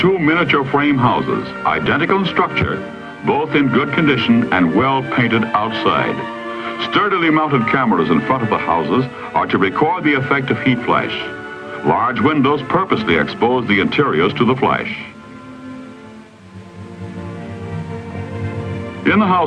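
Adaptive stream starting at a low bitrate, from 0.0 to 2.0 s: the player opened on a reduced-quality version of the stream so playback could begin at once, then switched up after gauging the connection. Through those first two seconds the treble is missing or synthetic and codec artefacts are stronger, which fits Opus at around 32 kbit/s. At 2.0 s the quality lifts abruptly, consistent with 64 kbit/s, with no gap in the audio.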